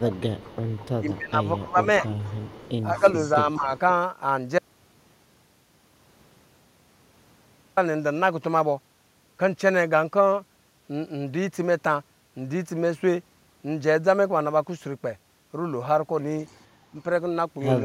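A speech recording marred by echo-canceller trouble early on and one long break in the middle. Speech suppressed in double talk shows up as the voice dipping and thinning at 0.0–0.34 s, 0.98–2.06 s, 2.94–3.05 s, 3.36–3.71 s and 16.92–16.96 s, with the deepest cuts about 15 dB in the first two stretches and about 10 and 5 dB later. The likely cause is a canceller that, faced with both ends talking, ducked the near talker along with the echo it was trying to remove. On a waveform these read as brief notches in the envelope, and a spectrogram shows the upper bands fading. Echo leak is heard at 0.12–1.12 s, 2.07–3.79 s and 16.46–16.64 s as a faint copy of the voice trailing it by 204 ms, about 25, 20 and 35 dB down respectively. This is likely loudspeaker pickup at the far end that the canceller left partly in place and sent back. A spectrogram shows it as a ghost of each syllable's harmonic pattern shifted 204 ms to the right. 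An audio dropout to a faint residue runs from 4.59 to 7.77 s, about 3.18 s during which the speech vanishes abruptly and only hiss remains, about 40 dB below the signal. The likely cause is the wanted signal dropping out while the path downstream stayed live. The waveform collapses to a thin noise band with sharp edges at both ends, and the spectrogram turns to even, featureless grey.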